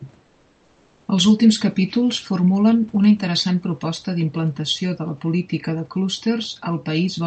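From 0.23 to 1.08 s the room's background gives way to a steady, featureless hiss about 2 dB quieter, likely comfort noise in place of the background during Opus discontinuous transmission. On a spectrogram the textured noise floor turns smooth and uniform, and the waveform envelope flattens slightly.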